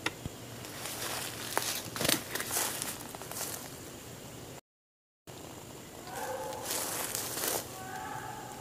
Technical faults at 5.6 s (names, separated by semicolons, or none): time-compressed catch-up